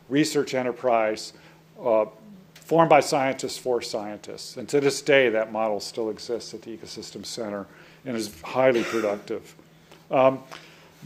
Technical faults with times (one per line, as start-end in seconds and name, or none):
none